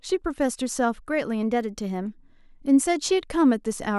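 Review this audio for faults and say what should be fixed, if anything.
From 1.43 to 2.17 s the speech jumps 5.5% faster and 93 cents sharp, then snaps back: a steady step rather than wavering wow, likely a drift correction step. Spreading clock-drift correction over small, gradual rate adjustments would prevent the audible jump.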